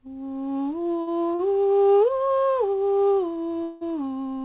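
At 1.01 s and again at 1.35 s, a short stall from a late packet occurs: the jitter buffer ran dry and the receiver held the last music for about 57 ms, then 40 ms, before resuming with nothing lost, leaving a stretched note with a slight buzz or dip. At 3.63 s a call audio freeze sets in, likely from packets held up in transit, and 180 ms of fading buzz or hiss fills the gap until the music picks up at 3.84 s where it left off. All of this sits on a band-limited call path with nothing above 4 kHz, consistent with G.711 A-law.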